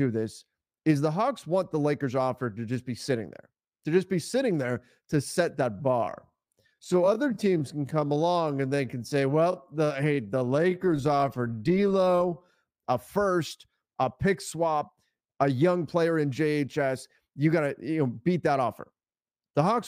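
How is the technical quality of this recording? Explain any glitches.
The recording has one glitch, a time-stretched section from 5.7 to 12.52 s. It starts after "sitting there to set" and ends before "a first a pick". The speech slows to about 0.67 times its pace while pitch holds steady. Software likely lengthened it by repeating short slices, which makes the speech drag.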